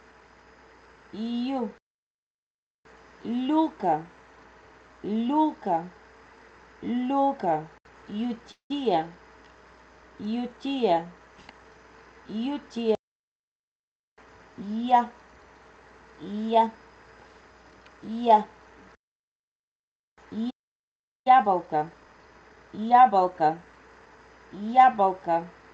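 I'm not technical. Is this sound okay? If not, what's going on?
No. There are four separate hiccups.

At 8.51 to 8.71 s there is a call audio freeze. The last bit of sound is stretched out as a short fading buzz, followed by about 0.11 s of silence. This is likely due to network packets arriving late and the receiver's buffer running dry. When the sound resumes, nothing is lost, but everything after it now plays about 0.19 s later.

From 20.50 to 21.27 s a playback stall cuts the sound off mid-flow for about 0.75 s of silence. The player likely either ran out of data or was briefly blocked. When it resumes, it picks up where it stopped, so it is now running behind.

From 21.27 to 24.27 s the player does a time-compressed catch-up to recover that lost time. It snips out tiny slices and blends the joins, so the sound runs about 1.15 times faster at normal pitch, with a hurried quality.

From 24.74 to 25.45 s there is a jitter buffer speed-up. 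Too much audio had piled up waiting, so the receiver trimmed many very short pieces, roughly 50 ms in total. This part plays about 7% fast, slightly rushed but at the same pitch.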